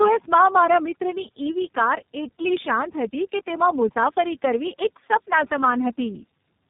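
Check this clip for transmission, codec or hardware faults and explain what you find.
The clip shows one fault, tandem speech coding, present from start to finish.

Throughout, the speech has passed through two speech codecs in succession, with its roughness and warble pointing to a low-rate AMR-NB stage and then iLBC, linked by a G.711 hop. Each coder re-encodes the previous one's errors, so the damage compounds: the voice sounds muffled, gritty and warbly. On a spectrogram, nothing appears above 3.8 kHz, and the harmonics look smeared and blotchy rather than cleanly striped.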